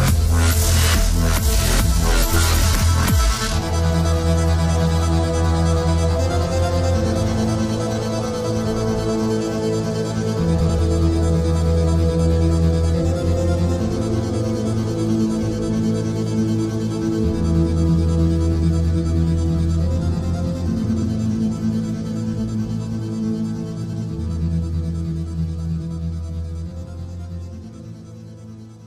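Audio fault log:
2.63–2.83 s, 10.59–10.79 s, 20.84–21.03 s, 23.83–24.02 s, frames out of order: each time, two adjacent chunks of about 93 ms play swapped, which fits blocks of four frames arriving reversed and being decoded as received. You hear a brief garbled flutter. Nothing is dropped or added, so the timing stays intact.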